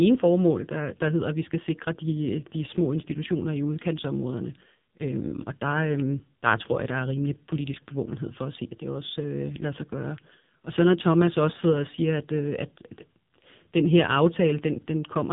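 It's a speech clip that's been through the AMR narrowband mobile codec for its whole length, and it's been squeezed hard. Everything above about 3.8 kHz is gone, which gives that boxed-in phone sound, and the voice comes out buzzy and synthetic because the codec rebuilds it from a vocal-tract model and a handful of pulses per frame. Damage this heavy fits one of AMR-NB's lower modes, around 5.9 kbps.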